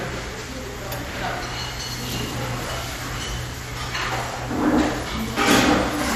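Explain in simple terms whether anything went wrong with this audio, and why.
MP2 compression, audible throughout the clip: the audio sounds dull, with nothing above about 14.7 kHz and a gurgling, grainy roughness. This is likely from an MP2 encoder that split the sound into narrow bands and, short of data, switched upper bands off and stored the rest coarsely.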